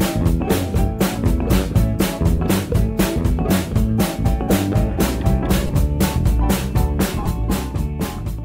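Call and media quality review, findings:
Lost LE Audio frames at 2.37 s, 5.67 to 5.69 s and 7.23 to 7.29 s. The LC3 decoder concealed each gap by repeating the last spectrum with random signs, giving brief noisy smears. Gaps fit one, three and six 7.5 ms frames. The last is scattered over 60 ms, with the longest run around 20 ms. Lossy compression damage is light throughout.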